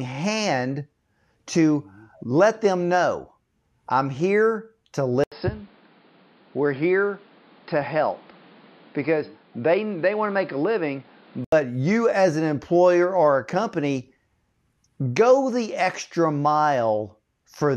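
Speech, dulled between 5.24 and 11.52 s, when everything above 5.2 kHz vanishes, a new background noise appears roughly 30 dB below the voice, and an 80 ms silence marks the changeover. Loudness stays about the same. The likely cause is an input switched to a poorer device mid-recording. The gap and the fresh noise floor set it apart from a plain filter or codec bandwidth drop, which would narrow the band without changing the background.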